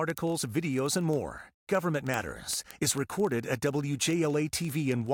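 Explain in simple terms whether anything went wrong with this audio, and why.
Yes, something went wrong. From 0.10 s to the very end, the speech carries word clock ticks. These are sharp ticks of uneven strength at a steady rate, roughly every 30 milliseconds, around 200 in total. They come from a digital link between two devices whose clocks were not locked together. The clocks disagree by about a tenth of a percent. Each time they drift past each other, one sample is lost or doubled, and that glitch makes a tick.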